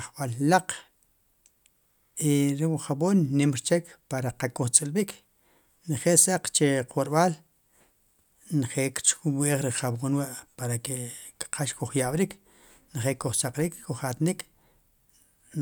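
No technical faults are audible.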